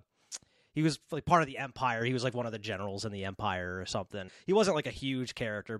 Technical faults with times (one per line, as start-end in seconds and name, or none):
1.45-1.73 one channel drops out
4.27 damaged data in a compressed stream